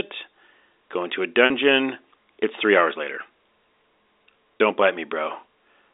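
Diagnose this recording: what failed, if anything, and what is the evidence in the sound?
Short buzzy holds at 1.46–1.50 s, after "into a", and at 4.59 s point to network packet loss with pitch repetition: the receiver looped the last pitch period across the 40 ms and 20 ms gaps.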